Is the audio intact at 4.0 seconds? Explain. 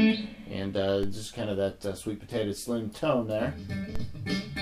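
No. At 3.96 s there is a DC step: the waveform's zero line suddenly jumps by about -22 dBFS, as if a converter recalibrated or an offset-carrying input was switched in. The offset then drains away slowly through a high-pass around 2 Hz. It is heard as a low thump at that instant. Unlike a dropout or a digital click, the sound itself runs on unbroken; only its baseline shifts and then settles.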